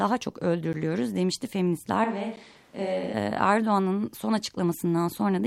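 It's a speech clip with two short blocks of digital silence, at 0.73 s and 2.36 s. Each drops about 10 ms of audio out into silence with hard edges, so you hear a quick tick or pop rather than a real gap, the sort of thing you get when the output buffer isn't filled in time. From 2.04 s to 3.14 s the voice suddenly turns roomy and hollow, loses some bass, drops roughly 5 dB, and picks up background noise sitting around 30 dB below the speech, then snaps back. That's most likely a switch to a distant microphone, with the close mic's signal dropping out for that stretch.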